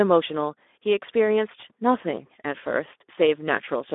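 Speex codec throughout: too few bits for the CELP excitation leave speech hoarse and buzzy, confined to 250 Hz–3.6 kHz, consistent with roughly 11 kbps.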